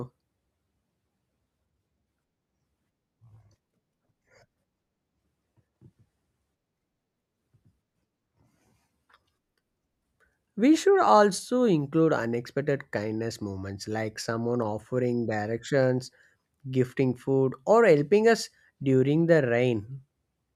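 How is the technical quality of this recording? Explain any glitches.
No glitches or faults detected.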